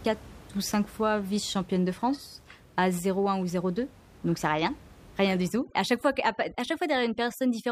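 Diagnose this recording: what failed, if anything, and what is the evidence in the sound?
Overdone noise removal in the call-processing stage, from 5.49 s to the end at 7.72 s. The room noise, about 24 dB below the speech, drops and breaks up into twinkling specks. An over-strong suppressor is cutting bands near its noise estimate.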